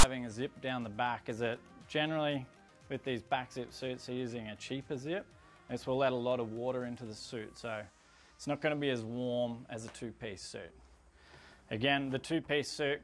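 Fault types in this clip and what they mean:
File tags played as audio: text metadata at the head of the file is decoded as if it were samples. From 0 to 0.03 s a loud, harsh rasp sits offset to one side. It starts and stops abruptly.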